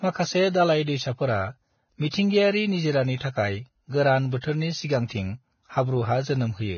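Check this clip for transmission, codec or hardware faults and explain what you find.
There is one fault, and it lasts the whole clip. Throughout, Vorbis compression, likely at a very low setting consistent with about 18 kbps, lowers the cut-off so that nothing remains above 6.6 kHz and quantises the treble coarsely. The surviving upper band turns to grainy hiss, roughening the speech and blurring its consonant attacks.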